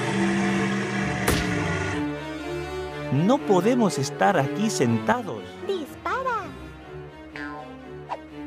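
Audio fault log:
5.12–8.46 s, sudden gain jump: The digital level was likely cut in one step from one sample to the next, with no ramp, as when a gain setting or bit shift takes effect instantly. At 5.12 s the audio drops by about 9 dB and stays there to the end. Because the whole signal was scaled at once, the background noise falls by the same amount.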